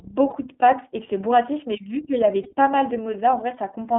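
The speech passes through the iLBC codec throughout. Its 30 ms frames code each stretch of excitation independently, at a rate that fits iLBC's 13.33 kbps mode, so only about 250 Hz to 3.5 kHz survives and the voice sounds plainly rough and synthetic.

Two lost iLBC frames follow, at 0.30 to 0.33 s and at 2.43 to 2.48 s. Each gap of about 30 ms fits a single missing frame. The decoder refills it by repeating the last pitch cycle mixed with noise, giving a brief buzzy, held vowel before the voice recovers almost immediately.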